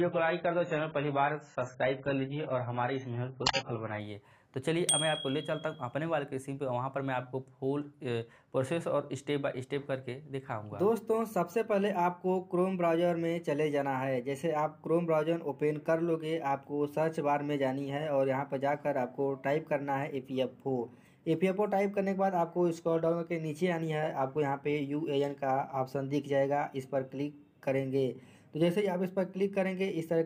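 For the first 4.0 seconds the audio sounds dull and smeared, with nothing above 7.6 kHz and clearly stronger codec artefacts. At 4.0 s the treble and detail return abruptly, with no gap or dropout. This is an adaptive stream starting at a low bitrate: the player began on a lean version to start quickly, which fits a rate of roughly 12 kbit/s. Once it had measured the connection, it switched to a richer version, around 96 kbit/s.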